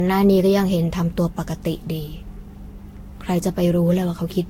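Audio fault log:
throughout generation loss: likely about seven successive lossy re-encodes stacking quantisation noise, leaving speech swirly, hollow and smeared, attacks blurred, nothing above 16.7 kHz.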